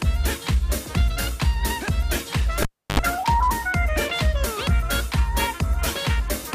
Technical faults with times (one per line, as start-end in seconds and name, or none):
2.62-3.00 cable pulled and plugged in